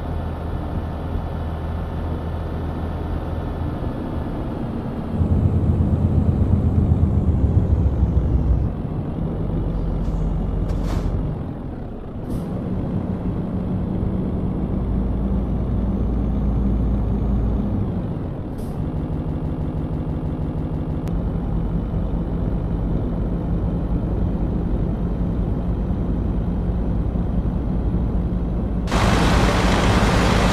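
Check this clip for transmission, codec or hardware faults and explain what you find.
One fault stands out: a broken-record loop from 18.97 to 21.08 s. Somewhere in the chain, the player, encoder or stream likely stalled and kept re-sending the last fragment it held rather than fresh audio. A 161 ms slice repeats exactly, 13 times back to back, giving a rapid stuttering judder about six times per second. Whatever sound should have filled those two seconds is gone; playback simply resumes after the loop.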